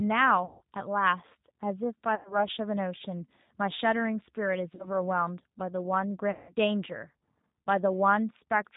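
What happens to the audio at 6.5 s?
Between 6.31 and 6.53 s the speech smears into a buzzy tone or a coloured noise that fades, and stays weak or distorted just after. That is VoIP packet loss concealed by the speech codec: about 180 ms went missing, which fits roughly nine 20 ms packets, and the decoder stretched its last pitch and filter while lowering the gain. The surrounding speech also carries plainly audible G.729 codec damage, a rough, slightly synthetic quality with nothing above 4 kHz, because this 8 kbit/s coder rebuilds the voice from a vocal tract model and a few pulses per frame.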